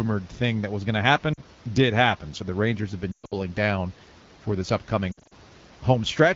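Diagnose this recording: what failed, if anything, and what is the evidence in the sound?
Lost AMR speech frames on the radio link: a brief 40 ms loss at 1.33–1.40 s after "that was going to". Scattered losses at 3.11–3.36 s before "down for this" and at 5.11–5.33 s fade to near silence, returning rough. Buffer dropouts would instead cut abruptly or click.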